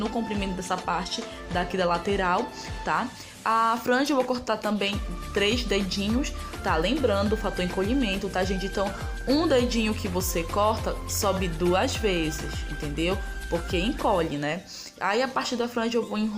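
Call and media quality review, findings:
No audible transport, capture or processing faults found in the signal; no action required.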